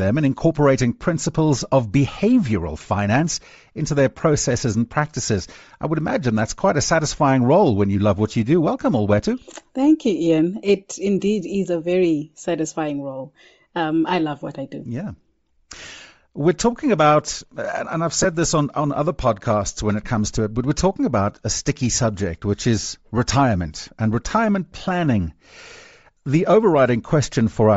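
Throughout, the speech has a grainy, breathy upper edge where the top of the spectrum has been replaced by filled noise, likely Bluetooth LC3 compression at around 32 kbps, rather than a clean, dull low-pass cut. At 5.25 to 5.28 s and again at 18.23 to 18.25 s come lost LE Audio frames. Short stretches of about 22 ms and 15 ms, fitting 7.5 ms frames, turn into a noisy smear of the preceding sound, not a silent gap or a click.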